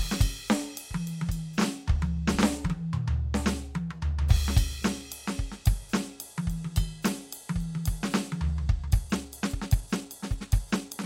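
From 8.84 s to the end, the music abruptly rushes ahead at about 1.35 times its pace while the pitch stays put, sounding rushed. This is a time-stretched section, likely squeezed by software that dropped short slices of audio to shorten it.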